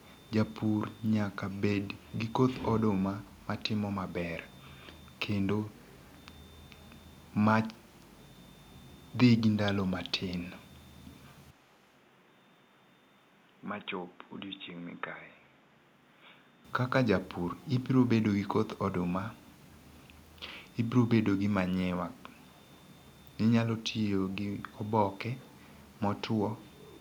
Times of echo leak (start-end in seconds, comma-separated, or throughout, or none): 4.97-5.19